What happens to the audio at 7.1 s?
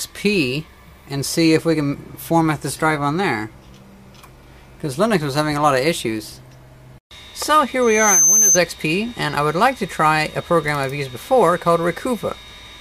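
Nothing goes wrong at 7.1 s; the audio carries on intact through that moment.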